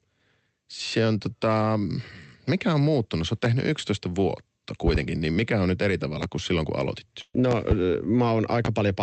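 Speech recording with two faults. A loud pop sits at 6.23 to 6.26 s, between "mikä on nyt eri" and "kuin silloin kun aloitit", and another at 8.65 to 8.68 s. Each is a single sharp transient roughly 15 dB above the signal, likely a voltage spike from a switch or driver glitch. A burst of packet loss follows "kuin silloin kun aloitit" at 7.21 to 7.35 s. About 120 ms of audio is replaced by a fading concealment extension of the preceding sound, and then the signal resumes with that stretch missing.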